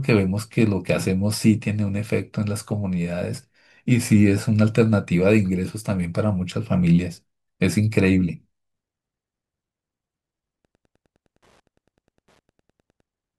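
From 10.58 s to 13.09 s, Wi-Fi interference appears. A Wi-Fi radio close to the audio circuitry is transmitting, and the circuit rectifies the radio's beacon, which repeats every 102.4 ms, into the audio band. The result is a steady ticking of roughly ten pulses per second under the speech. It sits far below the speech, around 45 dB down, so it is a faint, regular tick rather than an obvious buzz.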